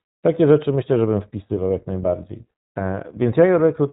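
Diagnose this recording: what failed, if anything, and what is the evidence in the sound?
Across the whole recording the speech sounds muffled, slightly rough and synthetic, with nothing above 4 kHz. That points to the codec stage, specifically the iLBC codec. It codes each frame's excitation independently, which fits 20 ms frames at 15.2 kbps, and it band-limits the signal to narrowband.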